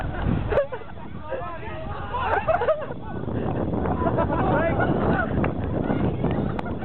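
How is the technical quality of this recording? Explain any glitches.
Two bursts of DAB burbling break into the sound. The first is brief, at 0.98 s. The second is longer, from 5.78 to 5.93 s. Both come from weak digital radio reception. Bit errors, at rates of roughly 0.1 and 0.15 percent, slipped past error correction into the MP2 audio data. Corrupted samples then put short blips of noise in single sub-bands.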